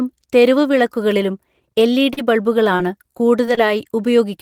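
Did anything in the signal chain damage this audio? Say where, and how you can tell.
Yes. The damage happened on the network. Short concealed packet loss at 2.13 to 2.19 s left about 40 ms missing, and the receiver filled roughly 35 ms by extending the preceding sound. On a spectrogram the harmonics flatten into a smeared band, and then the real audio resumes.

Repeated packet loss, which sounds robotic, runs from 2.77 to 3.59 s. There are what sound like four separate holes, the longest about 26 ms, and about a tenth of that span is concealed. The waveform shows repeated looped cycles and brief dips, giving a choppy sound.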